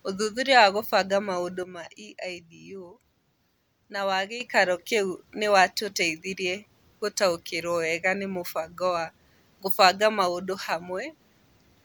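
From 1.63 s to 4.41 s, speech and background noise drop together by about 9 dB: a sudden gain jump, likely an unramped digital gain change.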